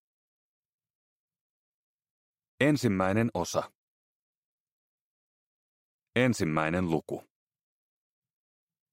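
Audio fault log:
No faults can be heard anywhere in this clip. Nothing in the sound calls for an entry in the log.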